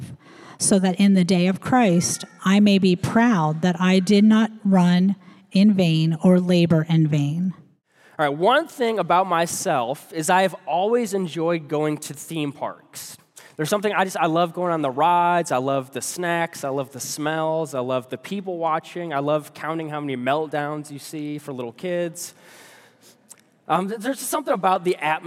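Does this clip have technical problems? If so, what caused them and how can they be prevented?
Yes. From 23.76 to 24.76 s the sound turns hollow and phasey, the sign of channel delay (comb filtering): one channel lags by around 10 ms, and summing to mono cancels evenly spaced frequencies from around 50 Hz upward. Keep channels time-aligned and check mono compatibility before summing.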